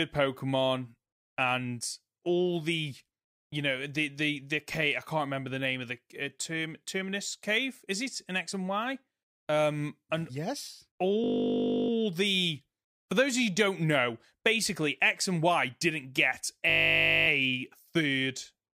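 At 11.24 s, right after "and yes", the speech locks into a system hang loop: a 20 ms slice repeats until 11.9 s, giving a steady 50 Hz buzz. It recurs from 16.7 to 17.28 s after "didn't get", as playback kept cycling one stalled buffer.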